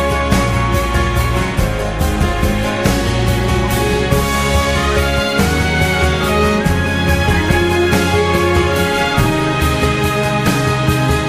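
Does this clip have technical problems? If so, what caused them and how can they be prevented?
No, there are no technical problems in this clip, so there is nothing to trace or prevent.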